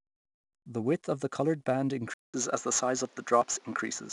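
From the start, the speech carries 4-bit ADPCM compression. Each sample is coded as a coarse step from a predicted value. The step size adapts as the signal changes. The error is a noise that rises and falls with the level. So every loud syllable has a gritty hiss on it. Sharp onsets are roughened where the step cannot grow fast enough. The damage is plainly audible. Nothing is heard above 10.8 kHz, which fits a rate of around 89 kbps.

Right after "of the coloured band", at 2.14 s, the sound drops out for 0.2 s. It then returns duller and narrower, and stays so to the end. This is likely an input switched to a poorer device. The new path passes nothing above 7.6 kHz. Its level differs by a few decibels. It brings its own background noise, roughly 35 dB under the speech. The change in tone is abrupt.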